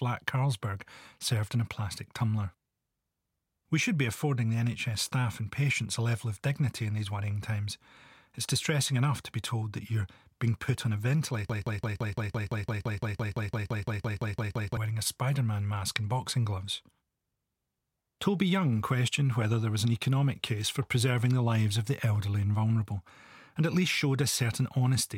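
From 11.50 to 14.77 s the speech falls into a broken-record loop: one 170 ms fragment repeats exactly, back to back, about 19 times. Unlike an echo, it neither decays nor overlaps. The likely cause is a stalled stream resending its last buffer, and the missing speech never returns.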